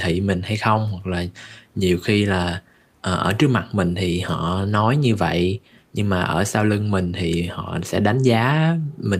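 No technical faults can be heard in this recording.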